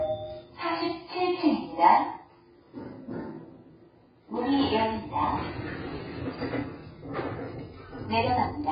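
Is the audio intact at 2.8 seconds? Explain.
No. At 2.8 seconds, as throughout the clip, the signal has likely been through heavy AAC compression, its spectral lines coarsely quantised to fit a very low bitrate, near 12 kbps. Nothing survives above 5 kHz, leaving the sound dull, smeared and warbling.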